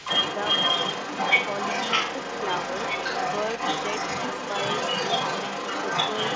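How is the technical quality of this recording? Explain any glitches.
The recording has two faults, both tied to echo control on a call. The main problem is a second voice that runs alongside the talker for the whole clip.

Speech suppressed in double talk appears from 0.00 to 0.05 s. The opening is pulled down by about 5 dB in a brief dip lasting about 50 ms. Both ends were likely talking at once. The echo canceller could not separate its own talker from the loudspeaker echo, so it turned everything down.

The other side's voice leaking through runs from 0.00 s to the end. Another voice is audible alongside the talker throughout. It sits around 5 dB above the speech, so it competes strongly. The far end was likely played on a loudspeaker, and the echo canceller left much of it in the microphone signal.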